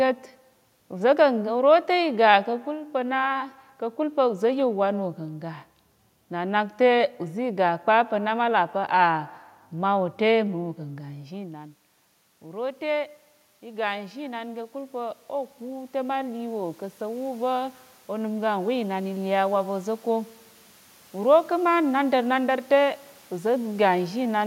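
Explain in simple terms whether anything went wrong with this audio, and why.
From 12.4 to 20.0 seconds, the voice and the room noise behind it slowly swell louder together. That is automatic gain rising: the system heard the voice drop when the talker moved away around 11 seconds and gradually turned itself up.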